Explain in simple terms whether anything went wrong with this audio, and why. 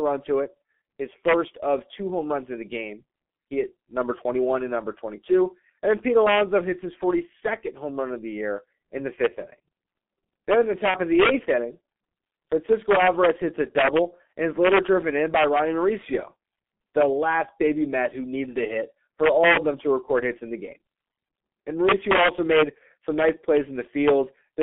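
The whole recording passed through the G.723.1 codec, a low-rate telephone compressor that keeps only about 200 Hz to 3.4 kHz, leaving the speech muffled, hoarse and blurred in its consonants. At 10.91 to 10.94 s there is VoIP packet loss concealed by the speech codec. The decoder filled a gap of about 30 ms, which fits one lost frame, by stretching the preceding sound into a brief, fading buzzy tone or coloured noise.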